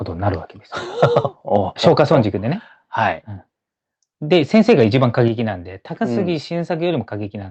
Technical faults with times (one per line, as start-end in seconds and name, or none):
1.86-2.15 microphone overload
1.88 microphone volume stepped down
4.32-5.22 microphone overload
5.28 microphone volume stepped down